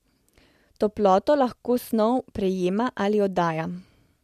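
No technical faults are audible.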